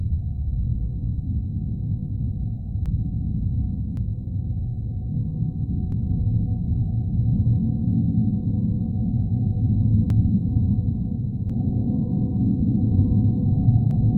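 At 2.86, 3.97, 5.92, 10.10, 11.50 and 13.91 s, compressed frames are skipped. Whole blocks of audio are lost, so the sound jumps forward by anywhere from about a tenth of a second to about 0.7 s. The frames are 92.9 ms long.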